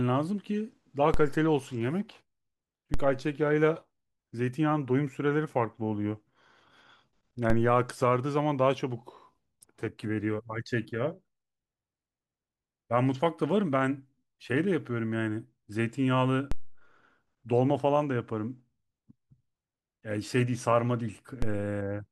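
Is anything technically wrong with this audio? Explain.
Yes. There are five DC steps in this speech clip, at 1.14, 2.94, 7.50, 16.52 and 21.42 s. At each one the waveform's zero line suddenly jumps, by about -16 dBFS for the first two and about -18 to -19 dBFS for the later three. It then drifts back as a 2 Hz high-pass bleeds the offset away. You hear each jump as a low thump while the speech carries on untouched.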